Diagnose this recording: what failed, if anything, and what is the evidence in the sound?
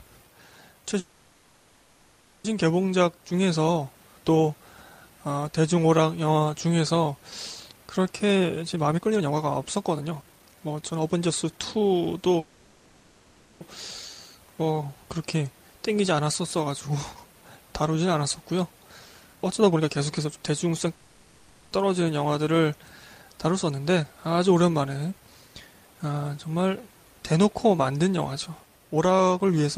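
Call audio freezes occur at 0.99 to 2.46 s, 12.40 to 13.63 s and 20.94 to 21.74 s. Each time the last sound is stretched into a fading fill before playback resumes intact. The likely cause is network delay draining the jitter buffer.

Jitter buffer speed-up follows at 8.24 to 12.35 s (133%), 19.34 to 20.89 s (131%) and 23.70 to 26.20 s (111%). The pitch stays put while the sound hurries. The receiver trims pitch-period slices to shed built-up delay, roughly a second and a half in the first stretch.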